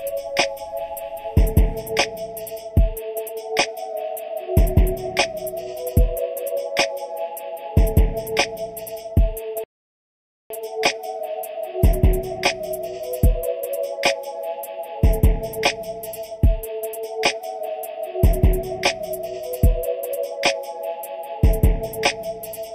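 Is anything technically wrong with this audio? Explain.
Yes, there are two faults.

Channel delay (comb filtering) is present for the whole clip. One channel arrives a fraction of a millisecond behind the other, and when the two are summed to mono, the shared content cancels at regularly spaced frequencies. The first notch falls at roughly 1.5 kHz, with further notches evenly spaced above it. This fixed pattern of gaps in the spectrum makes the audio sound hollow and phasey throughout.

A rebuffering stall runs from 9.64 s to 10.50 s. Playback ran out of downloaded audio, halted, and waited for more data before continuing. The sound drops to silence for about 0.86 s, then resumes at exactly the point where it stopped. No material is skipped, but the gap adds that much time to the clip and breaks its continuity.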